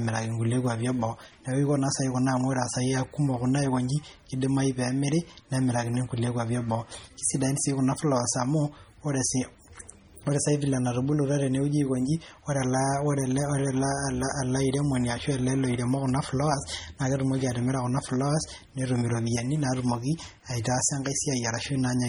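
Throughout, the speech sounds watery and swirly, with chirpy sibilants and dull treble. This is likely heavy MP3 compression, fitting a starved bitrate near 32 kbps.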